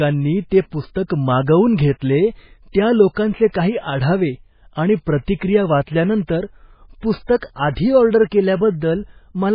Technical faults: MP3 compression

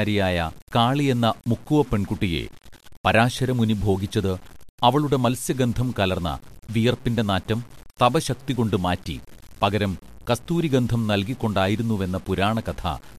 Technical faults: low bit depth without dither

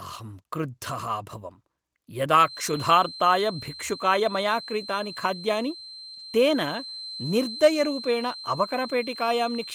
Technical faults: feedback whistle; lost packet rebuilt from error correction; short concealed packet loss

